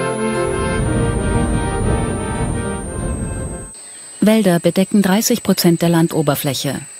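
A switching power supply is running in an audible burst mode or beating with another one from start to finish, leaking a switching supply whistle into the audio. It sits around 10 kHz, wandering between about 8.0 and 10.1 kHz, roughly 20 dB below the signal.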